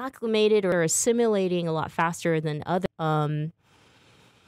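At 0.72 s, just before "are assimilating a lot", and again at 2.86 s, right after "a lot faster than", damaged data in the compressed stream makes the decoder misread a frame and lose sync until it finds the next header. Each event is a brief glitch, a chirp, squawk, click or short hole.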